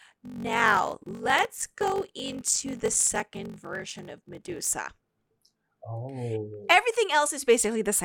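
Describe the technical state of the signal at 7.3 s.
At 7.3 s the speech signal is intact, with no technical fault present at that moment.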